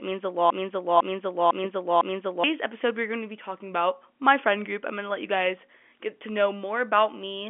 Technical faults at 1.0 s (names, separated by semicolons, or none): broken-record loop